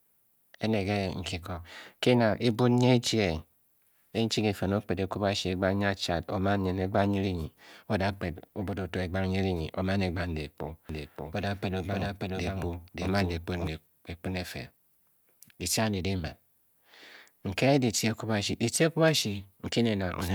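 From about 10.89 s to 13.67 s the speech suddenly gets a twin: a doubled audio track, with a second full-band copy trailing the original by roughly half a second at about the same level. There's no reverb tail or room colour on it, just a clean duplicate that cuts in and out abruptly. The likely cause is the same signal reaching the mix twice, once through a slower path that lags behind.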